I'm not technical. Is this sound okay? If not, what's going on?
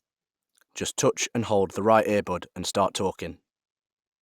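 Yes, nothing wrong can be heard in this recording.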